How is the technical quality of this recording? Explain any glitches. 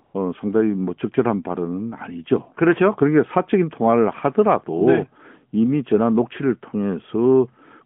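The recording is narrowband phone-line speech, passing roughly 150 Hz to 3.4 kHz through an AMR narrowband mobile codec with light coding damage, consistent with its highest 12.2 kbps mode. It has one glitch, right at the start.

From 0.04 to 0.14 s, the real background gives way to a smooth, even hiss for about 100 ms. This is AMR comfort noise. The phone judged the line silent and stopped sending speech frames, so the receiver filled that gap with synthetic noise built from a rough sketch of the background's level and spectrum.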